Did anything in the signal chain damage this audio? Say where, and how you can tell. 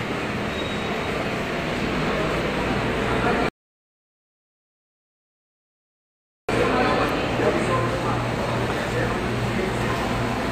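Yes. The playback stage let its buffer run dry, producing a rebuffering stall: the player exhausted its downloaded audio and stopped until more data arrived. The sound cuts abruptly to silence at 3.49 s and picks up again at 6.49 s exactly where it left off, with no skipped material and no repeat. Nothing is removed from the sound itself, but the pause adds 3.0 s to the running time.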